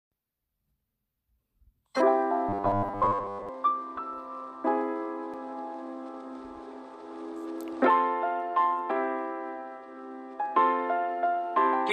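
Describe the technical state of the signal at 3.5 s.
At 3.5 s the signal is just leaving a stretch of robotic sound from repeated short buffers, which runs from 2.49 to 3.49 s. The sound becomes a rigid, metallic buzz at 100 Hz. The likely cause is audio arriving too seldom, so a 10 ms slice is replayed in place of most of the real material.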